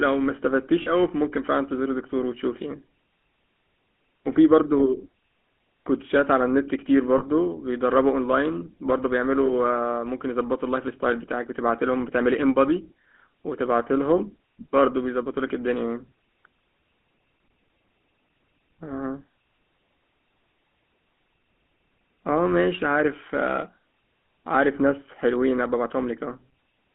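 Throughout, the speech carries the buzzy, gravelly roughness of the GSM full-rate codec, consistent with its 13 kbps coding. The line is limited to 200 Hz to 3.4 kHz. Unlike simple band-limiting, the excitation is crudely pulse-modelled, so the grit sits inside the voice itself rather than just a dulled top end.

Lost GSM frames occur at 0.82–0.89 s and 7.18–7.24 s, each gap fitting about two frames, then at 9.46–9.51 s and 14.18–14.21 s, fitting single frames. Rather than dropping to silence, as a plain dropout would, each gap holds the last good sound as a brief, rough metallic ring.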